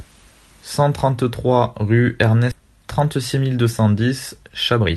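Speech, run through a call codec whose top end stops around 12 kHz, which fits Opus. At 2.51–2.53 s there's a skip ahead: about a second of audio got dropped and playback jumps straight forward with no gap. From 2.61 s to 4.96 s you get a jitter buffer speed-up, running about 110% speed at the same pitch, so it sounds hurried. That's likely the receiver trimming tiny pitch-period chunks, roughly a third of a second in total, to shrink its backlog.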